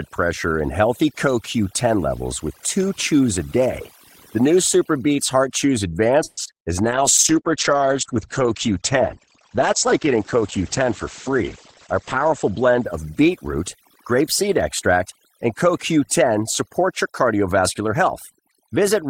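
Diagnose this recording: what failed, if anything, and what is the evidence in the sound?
Overdone noise removal, in the call processing stage, runs through the whole clip. The background drops and breaks up into twinkling specks, and the speech has had its quieter components pulled down along with the noise floor. The suppressor's threshold was set too aggressively: bands near its noise estimate are gated hard, so low-level parts of the speech are removed with the hiss.

At 6.23 s the audio stops advancing and the last sound is stretched into a fading buzz or hiss for about 140 ms, until 6.39 s, after which the speech resumes from where it left off with nothing lost. That is a call audio freeze at the network and jitter buffer stage, likely caused by delayed packets draining the buffer while the receiver extrapolated. It also adds about 140 ms of delay.

Short concealed packet loss follows immediately, at 6.43 to 6.55 s and again at 6.59 to 6.63 s, each covering 20 ms of audio that never reached the decoder. 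Both are heard as brief smears where the receiver continued the preceding sound and blended back into real audio. The first concealment also stretches the timeline by roughly 15 ms. These are network losses, patched by the decoder's concealment.

A call bitrate drop, a codec-stage fault, starts at 6.83 s, just before "grapeseed extract and", and runs to 13.85 s. The encoder falls from 32 to 11 kbps and stays at the lowest rate for about 5.5 s. Audio bandwidth narrows from 20 kHz to 8 kHz, so the speech turns muffled and rough. Congestion control lowered its bandwidth estimate and the Opus encoder was forced into coarser, band-limited coding.

From 16.83 to 18.31 s the speech runs about 6% fast at unchanged pitch and sounds slightly hurried. This is jitter buffer speed-up. The receiver held more audio than its target, and it cut short pitch-period segments repeatedly, roughly 100 ms in total, to bring latency back down. 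It is a buffer management action in the call's receive path, not a change at the source.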